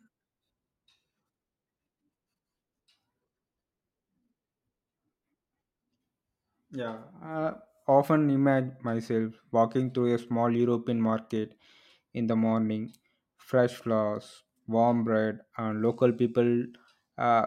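A speech recording, with nothing technically wrong with it.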